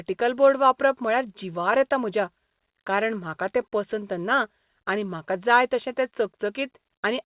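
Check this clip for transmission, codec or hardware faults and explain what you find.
No transmission, codec or hardware faults turn up in this speech clip.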